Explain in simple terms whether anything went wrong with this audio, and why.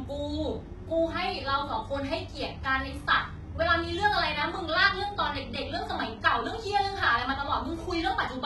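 The speech sounds gritty and metallic from start to finish, with s sounds coming out lispy and nothing above about 11.8 kHz. The likely cause is heavy HE-AAC compression, which keeps only the lower sounds and fakes the treble by copying them upward.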